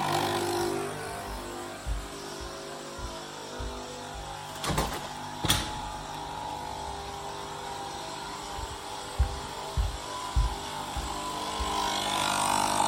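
Nothing in the audio stood out as a technical problem on listening.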